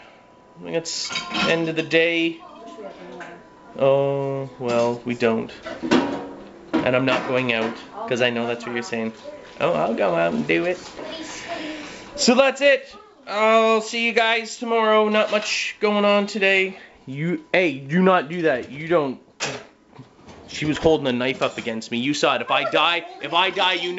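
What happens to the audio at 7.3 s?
Nothing goes wrong at 7.3 s; the audio passes through intact there, carrying only the usual band limit of the G.722 call path, with nothing above 8 kHz.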